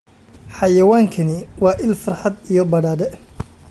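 No technical faults can be heard anywhere in the speech.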